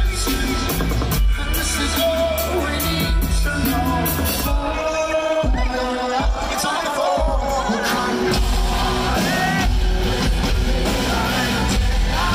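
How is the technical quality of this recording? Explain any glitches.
The recording has one glitch, a time-stretched section from 4.38 to 7.52 s. The audio plays 1.94 times faster while its pitch holds, likely because software squeezed it to fit a length by dropping short slices. It sounds rushed. On a spectrogram, events crowd together in time while their frequencies stay put.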